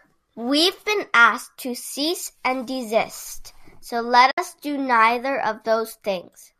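At about 4.31 s the speech drops into a short silence that lasts until roughly 4.38 s, around 70 ms, which fits a run of several short low-delay frames going missing. That's AAC frame loss with muting: the decoder zeroed the spectrum for the missing frames, and the overlapping windows ease the sound down into the gap and back up out of it. The result is a soft-edged hole, all of it sitting on a slight coding texture that is likely from low-delay AAC.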